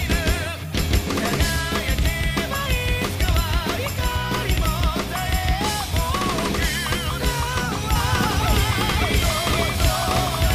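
A second copy of the signal, likely from a slower capture path running alongside the first, is mixed in from 7.96 s to the end: a doubled audio track trailing about half a second behind at roughly equal level, starting abruptly and sounding dry, with no decay or room colour.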